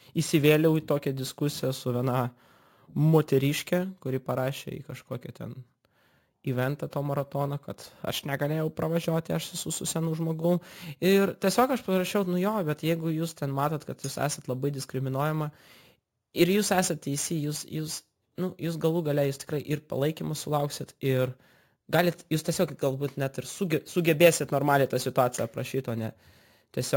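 Throughout the speech, a bright metallic fizz about 19 dB down rides its level. This is imaging from sample-and-hold upsampling, which points to 16 kHz audio repeated unfiltered, mirroring into 8–16 kHz.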